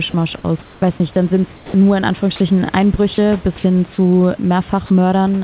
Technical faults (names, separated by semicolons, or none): sound dropped by the voice detector; comfort noise in place of the background